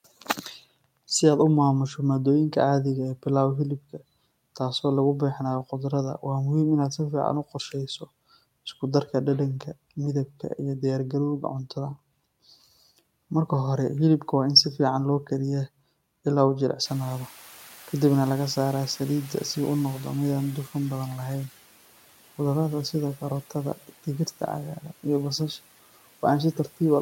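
At 16.85 s, just after "ilaa uu", the room noise jumps by about 21 dB, and the noise suppressor is caught catching up. Its noise estimate still reflects the quieter background, so the louder noise passes with little reduction at first. Over 4.6 s, until 21.45 s, the estimate adapts and the noise sinks by about 8 dB, a gradual fade. After the rise, the noise sits about 22 dB below the speech.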